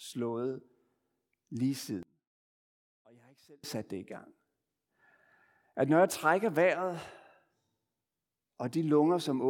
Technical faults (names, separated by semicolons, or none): one channel inverted